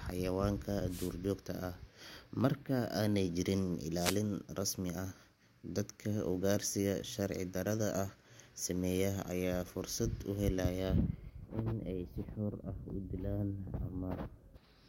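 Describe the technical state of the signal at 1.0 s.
At 1.0 s the speech is caught in a wireless microphone noise hit, running from 0.87 to 1.14 s. That is about a quarter of a second. The radio link from the analogue FM microphone fades here, as reflected paths cancel the signal at the receiver. With less signal, receiver noise rises over the speech. It is heard as a brief swish of static before the signal recovers.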